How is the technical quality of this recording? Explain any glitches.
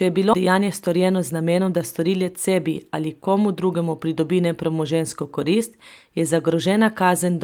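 The recording has two timing faults near the start.

At 0.33 s, right after "je bilo", there is a skip ahead: roughly 0.7 s of audio was discarded while later audio was already waiting, so playback jumps forward with no silence inserted. Unlike a dropout, there is no gap, just an abrupt splice.

From 0.47 s to 2.49 s, ending just before "ali komu drugemu pridobi", a jitter buffer speed-up runs at about 109% speed. The buffer had built up excess delay, so short pitch-period pieces, around 0.2 s in total, were cut repeatedly. The audio sounds hurried, but unlike resampling, the pitch stays unchanged.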